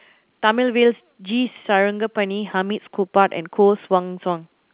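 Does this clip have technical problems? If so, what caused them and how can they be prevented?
No, nothing faulty is audible in this telephone speech.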